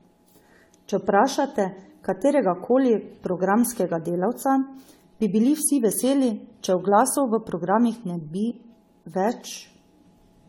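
Speech with generation loss throughout. It sounds swirly, smeared and hollow, and attacks blur. Nothing is present above 19.3 kHz. This likely comes from re-encoding about seven times with a lossy codec, which fits AAC-LC at 64 kbit/s.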